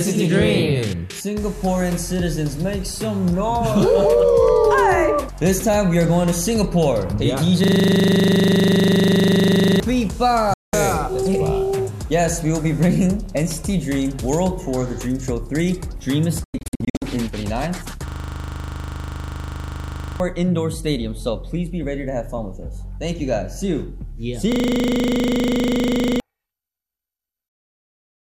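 From 7.64 to 9.8 s a system hang loop repeats one 40 ms piece 54 times at 25 Hz, because the driver froze while the hardware kept replaying its ring buffer. About two seconds of audio are lost. At 10.54 to 10.74 s a digital broadcast dropout mutes the sound after a 3 ms fade, losing 192 ms while the receiver waited for valid frames. A second dropout from 16.44 to 17.02 s punches several holes totalling 360 ms, the longest 96 ms. Hang loops return from 18.08 to 20.2 s, with 53 repeats and about two seconds lost, and from 24.52 to 26.2 s, with 42 repeats and about 1.5 s lost. Each loops the same 40 ms segment at 25 Hz.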